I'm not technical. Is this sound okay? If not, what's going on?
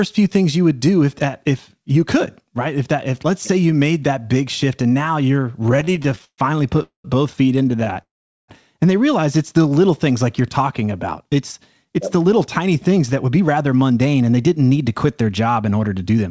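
No. Between "shift and now you're" and "both feet" (5.63 to 6.81 s), and again just after "both feet" (7.69 to 7.96 s), the speech keeps catching for an instant. These are repeated stalls (stutter): many tiny hitches, the longest about 0.13 s, rather than one clean gap.

At 6.83 to 7.05 s and 8.01 to 8.49 s there is a call audio freeze. Each is a single pause where the last sound hangs and fades, mostly to silence. It is likely caused by a burst of delayed data arriving late.

From 9.58 to 9.76 s, between "they realize it's" and "things like you're talking", there is a jitter buffer slow-down. The voice briefly drags to about 78% speed at the same pitch, so it stretches without stopping.

From 11.4 s to the end there is a jitter buffer speed-up. The speech runs about 8% fast at normal pitch, roughly 0.4 s trimmed away. It sounds hurried, not chipmunk-like.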